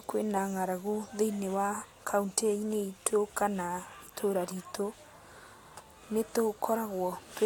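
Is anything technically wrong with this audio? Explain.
No technical faults are audible.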